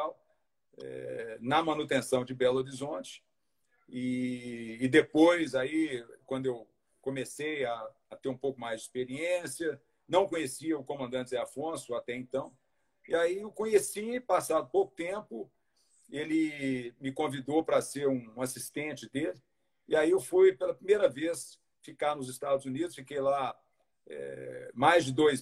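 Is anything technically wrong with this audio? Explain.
No, nothing technical stands out here; the audio sounds steady and intact the whole way, with nothing that needs fixing.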